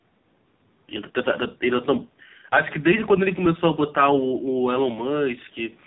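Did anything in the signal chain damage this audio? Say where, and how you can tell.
Yes, at the codec stage. The whole clip has gone through the AMR narrowband mobile codec, AMR-NB, at a low 5.9 kbps, and the damage is heavy. There's nothing above 4 kHz from start to finish, and the speech sounds buzzy and synthetic. At that bitrate the encoder rebuilds each 20 ms frame from a crude vocal-tract model driven by only a few pulses, so natural texture becomes that rasping, artificial edge. The call's microphone processing upstream only trims the deepest bass, which is expected.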